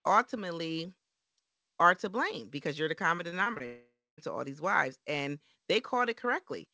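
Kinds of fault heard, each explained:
Repeated packet loss (robotic sound): from 3.16 to 3.62 s, right after "blame because you're the", five short gaps of up to 20 ms each are patched by stretching the preceding sound, so about a fifth of that stretch is filled in and the speech turns choppy and robotic.
Long network dropout: from 3.66 to 4.20 s, just before "to all these wives", about 520 ms of audio is missing. This is likely caused by a network stall. The last sound is carried on and fades, roughly 230 ms of it is silence, and speech resumes without the lost part.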